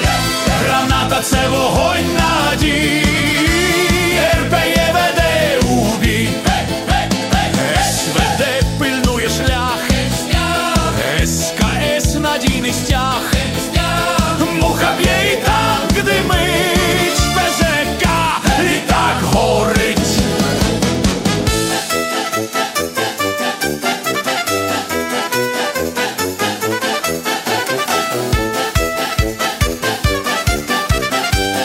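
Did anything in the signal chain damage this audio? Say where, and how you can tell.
No, nothing in the signal chain stood out as a problem on listening.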